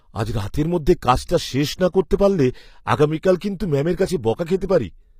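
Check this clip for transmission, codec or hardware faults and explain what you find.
There is one fault, present for the whole clip. The speech carries HE-AAC compression artefacts throughout. The treble sounds synthetic. Sibilants come out gritty and metallic, and the top end stops entirely at about 15.5 kHz. The likely cause is HE-AAC encoding at a low bitrate, consistent with roughly 24 kbps. The codec keeps only the lower spectrum. It rebuilds the highs by copying lower bands upward under a coarse envelope. The copied harmonics don't align with the real ones, so the upper band sounds artificial.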